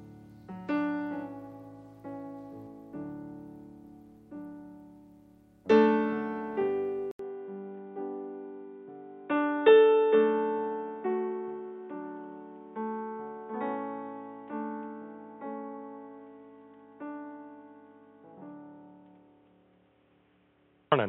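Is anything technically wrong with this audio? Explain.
Yes. At 7.11 s the sound drops out for 80 ms. From there to the end, nothing passes above 3.8 kHz. This is likely an input switched to a poorer device. Its narrower band makes the sound dull and boxy. A faint new noise floor appears. Loudness holds steady.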